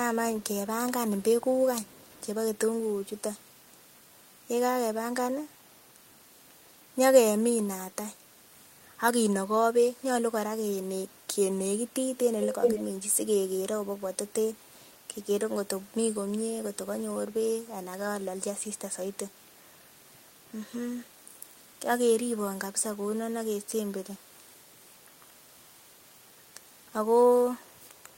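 Echo leak at 0.34–2.27, 3.19–3.78, 12.4–12.83, 19.13–21.45 and 22.56–28.17 s: the speech repeats 370 ms late, faintly, but as loud as the original around 12.4 s. The likely cause is an echo canceller passing loudspeaker pickup back. Spectrograms show each harmonic pattern duplicated 370 ms later.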